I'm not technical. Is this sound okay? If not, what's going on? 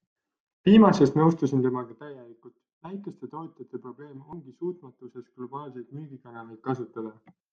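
No. From 1.33 to 2.57 seconds there is zipper noise. The speech gets much quieter there, but in tiny jumps instead of one smooth slide. About a hundred steps a second each add a small click, heard as a buzzy zipping.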